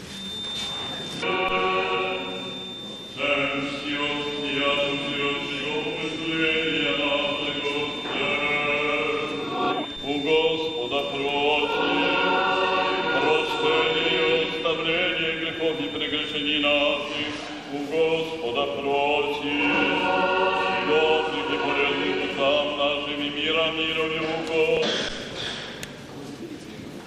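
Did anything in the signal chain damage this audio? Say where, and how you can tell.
Yes: a feedback whistle runs from the start to 17.1 s, a steady, thin tone at 3.6 kHz about 10 dB below the sound, swelling and fading slowly in level. It likely comes from an acoustic loop between loudspeaker and microphone held just short of runaway.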